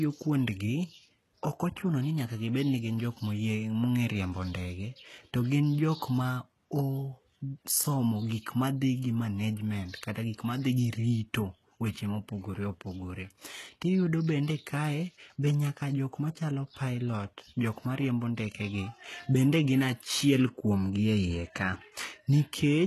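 Throughout the speech, HE-AAC compression is likely: treble is rebuilt from copied lower bands, cutting off near 12.4 kHz, and s sounds come out gritty and metallic.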